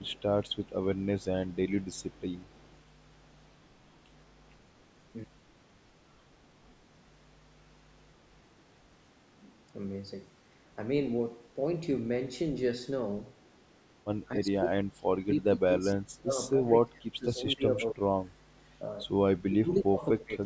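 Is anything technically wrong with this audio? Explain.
Yes, two faults stand out in this speech clip.

The first is an echo leak, from the start to 3.87 s and again briefly at 18.57 to 18.61 s. A faint copy of the speech, roughly 35 to 40 dB down, trails the original by 269 ms. Most likely, a loudspeaker at the far end fed its microphone and the echo canceller let a residue through. Unlike room reverberation, which smears continuously, this is a distinct repeat at one fixed delay.

The second is speech suppressed in double talk, at 2.58 to 2.64 s, 14.35 to 18.05 s, and 19.42 s to the end. The level dips by about 15 dB in the first brief spot and by as much as about 30 dB in the longer stretches. The likely cause is an echo canceller that could not separate its own talker from the echo while both sides spoke, so it turned everything down. Packet loss sounds different, with abrupt gaps or robotic fill. 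Here the speech is pushed down only during overlap. The audio's top end stops at 8 kHz, which is normal for this call path.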